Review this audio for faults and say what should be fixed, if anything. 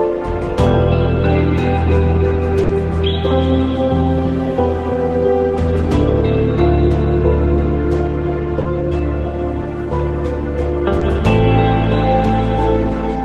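A burst of packet loss at 2.63 to 2.71 s leaves about 60 ms missing. The receiver extends the preceding sound and fades it, so a spectrogram shows a frozen, dimming smear, and the waveform decays before resuming abruptly. A larger jitter buffer or forward error correction would prevent this.

Short concealed packet loss occurs at 8.61 to 8.67 s (40 ms) and 10.99 to 11.03 s (20 ms). Each gap is bridged by extrapolating the last pitch or noise, causing a brief smear, with flattened spectrogram detail and a soft waveform seam. In-band redundancy or retransmission would prevent it.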